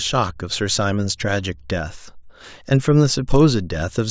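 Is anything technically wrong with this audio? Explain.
Yes. From 2.64 s to the end, the resampler restarted on every block, apparently converting 40 ms chunks, consistent with 24 kHz to 16 kHz, without carrying history across edges. Each edge gets a small error, producing a 25 Hz buzz present only while sound plays. Its strict regularity distinguishes it from random dropout clicks.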